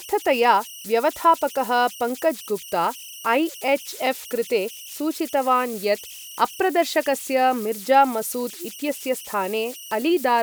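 Throughout the speech, an undithered delta-sigma converter settles into repeating bit patterns whenever its input is small, producing converter idle tones. A tone somewhere around 3 kHz sits about 18 dB below the speech, showing in pauses and as grainy noise under quieter passages.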